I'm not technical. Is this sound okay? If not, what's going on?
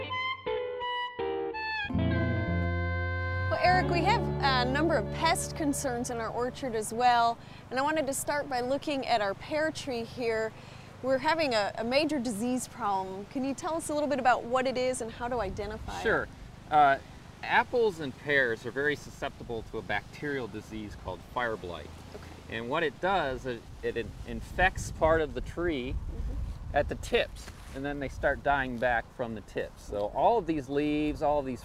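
Yes, this sound is okay, and nothing in it points to a technical problem. There's nothing here that needs fixing.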